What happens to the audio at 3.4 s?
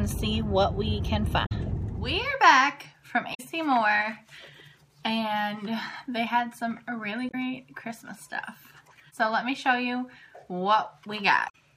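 Damaged data in a compressed stream, from 3.31 to 3.40 s: the decoder misreads corrupted frames and loses sync, producing a brief chirp, squawk, click or short hole.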